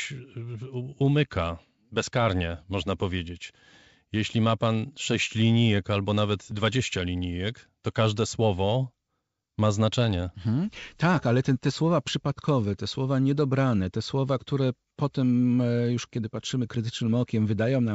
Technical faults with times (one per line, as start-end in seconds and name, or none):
none